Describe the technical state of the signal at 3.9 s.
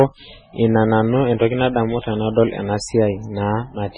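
At 3.9 s the speech still carries the heavy damage of what is likely MP3 compression, present across the whole clip. Starved of bits, the encoder has cut everything above 10 kHz and dropped weak frequency lines, so the sound turns watery and swirly, with metallic chirps on s sounds and smeared onsets, which fits a very low bitrate near 16 kbps. A spectrogram shows a hard ceiling at 10 kHz and patchy, flickering blocks below it.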